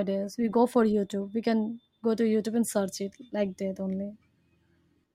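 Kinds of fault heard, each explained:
No technical fault can be heard in this speech recording. Nothing in the sound points to a problem with how it was captured or carried.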